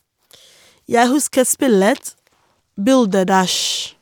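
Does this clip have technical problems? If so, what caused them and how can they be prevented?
No, nothing in this speech clip points to a technical fault, so there is nothing to trace or prevent.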